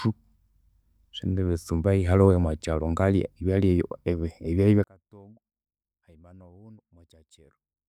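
From 4.84 s to the end at 7.88 s, the voice collapses to a faint ghost, about 33 dB quieter. This is likely one channel inverted: reversed polarity on one side cancels the centred speech when both channels sum to mono.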